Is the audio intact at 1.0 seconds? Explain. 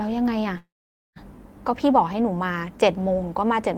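No. From 0.57 to 1.18 s the last sound stretches into a brief fading buzz or hiss, then about half a second of silence covers 1.0 s. This is a call audio freeze, likely from delayed packets emptying the jitter buffer. Nothing is lost; the sound resumes about 0.59 s late.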